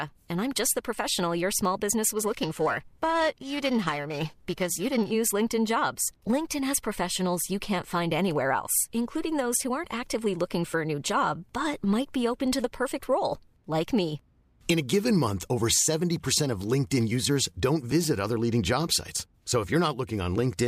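From 2.17 to 5.11 s, just after "professional your small business", periodic clock jitter sets in: interference wobbles the converter's sampling clock at around 1 kHz, placing sidebands that distance either side of every speech component, most strongly on high frequencies, giving a rough, metallic edge absent in pauses.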